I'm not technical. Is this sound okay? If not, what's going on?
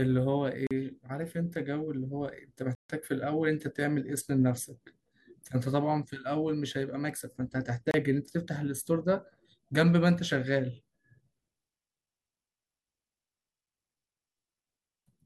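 No. The speech cuts out to silence three times: at 0.67 s for about 40 ms, at 2.75 s for about 145 ms, and at 7.91 s for about 30 ms. Each is a Bluetooth stall. The likely cause is interference holding up the wireless signal, so the headphones run out of sound and wait.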